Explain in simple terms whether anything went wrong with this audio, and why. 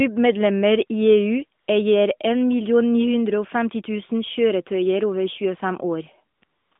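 Something did go wrong, and it is AMR comfort noise. The speech travelled over an AMR narrowband mobile link, which sounds like a normal phone line. During short pauses the phone decided nobody was talking and stopped sending the real sound. The receiver filled each gap with smooth, made-up background noise instead. This happens briefly at 1.60 to 1.68 s, then in a cluster near the end: 6.38 to 6.42 s, 6.44 to 6.72 s, 6.74 to 6.76 s and 6.78 to 6.80 s.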